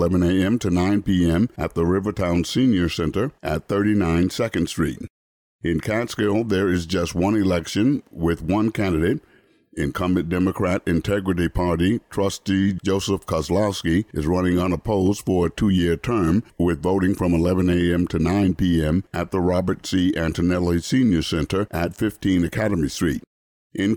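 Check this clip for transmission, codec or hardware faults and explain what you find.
No transmission, codec or hardware faults can be heard in the signal; it carries no dropouts, clicks, distortion or other technical disturbances.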